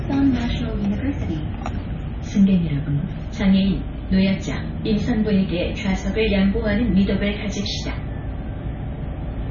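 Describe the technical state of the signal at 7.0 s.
MP3 compression affects the sound at 7.0 s, as it does across the whole clip. The likely cause is an MP3 encoder starved of bits, with heavy damage consistent with a bitrate near 23 kbps. It removes all treble above 6.9 kHz and discards weak spectral detail that flickers between frames. At 7.0 s this is heard as a dull, band-limited sound with a watery, swirling texture and softened, smeared attacks.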